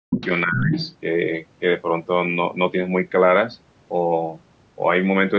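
From 0.0 to 0.21 s the speech is pushed down hard, nearly to silence, and again from 0.46 to 0.76 s by around 20 dB. This is speech suppressed in double talk, likely an echo canceller ducking both voices at once. From 0.12 to 0.26 s and 0.52 to 0.95 s, the other side's voice leaks through, only slightly quieter than the speech, likely residual loudspeaker echo.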